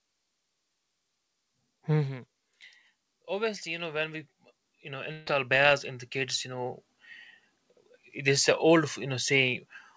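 A speech recording carried over a call path, with nothing above 8 kHz, which points to a wideband call codec such as G.722. From 3.12 s to 7.19 s, automatic gain rising lifts the level by about 14 dB over roughly four seconds. The control judged the input too quiet and turned its gain up step by step. This differs from a talker simply getting louder because the background noise swells in step with the voice. Inside that rise, at 5.12 s to 5.28 s, a burst of packet loss takes out about 140 ms. The receiver fills the hole by stretching the last received sound, so a held buzz or hiss fades rather than dropping to silence. Speech then resumes further along with that stretch missing. That filled, fading gap with skipped content distinguishes it from a plain dropout or mute.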